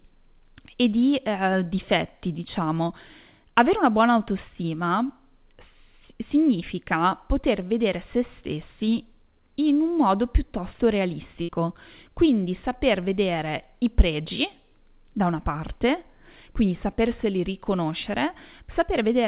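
At 11.42 s, just after "in un modo piuttosto", a burst of packet loss cuts the speech until 11.50 s. The receiver stretches the last sound for about 60 ms, fading it as it goes. About 60 ms of speech never returns, so the sentence jumps ahead. The band stops at 4 kHz, which fits the G.711 mu-law call path.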